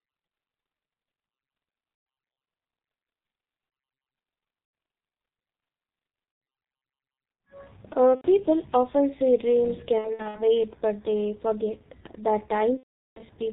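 Muffled, hoarse speech with smeared consonants runs the whole clip: the G.723.1 codec at 6.3 kbit/s discards everything above 4 kHz and refreshes its voice model only every 30 ms frame, so detail is heavily degraded.

Brief stretched, buzzy tones or coloured noise that fade appear at 1.94–2.06 s, 4.64–4.73 s, 6.32–6.41 s, 8.15–8.25 s, in scattered bursts across 9.99–10.42 s, and most severely at 12.77–13.23 s. These come from VoIP packet loss concealed by the speech codec. The decoder extends its last pitch and filter, then lowers the gain frame by frame, muting from the third lost frame in a row.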